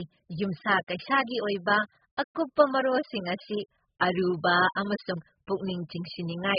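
From start to finish the speech has nothing above 5 kHz and sounds dull, smeared and warbly, with fizzy sibilants. That's likely heavy AAC compression, which at such a starved bitrate, down around 8 kbps, drops the top band and leaves holes elsewhere.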